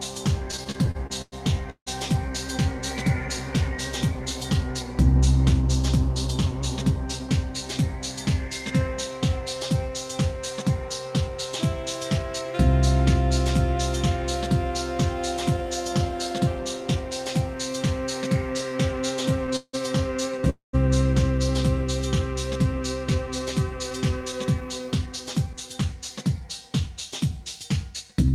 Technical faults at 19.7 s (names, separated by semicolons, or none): repeated stalls (stutter)